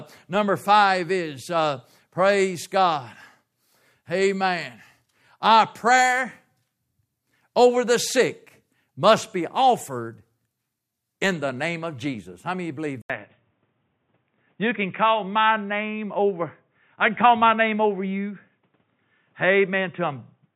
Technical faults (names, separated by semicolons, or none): input switched to a poorer device